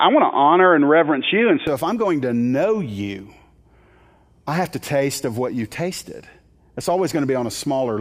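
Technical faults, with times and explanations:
0.00–1.67 s, input switched to a poorer device: the sound is boxy with nothing above 3.6 kHz, about 5 dB off in level and carries faint extra noise, likely from a narrowband microphone. It clears with no gap just before "if I'm going to".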